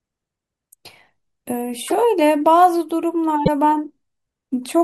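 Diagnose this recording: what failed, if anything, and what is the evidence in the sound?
Codec stage: brief disruptions at 1.87–1.93 s and 3.44–3.48 s, likely a broken MP3 bit reservoir, with frames decoding from another frame's bytes.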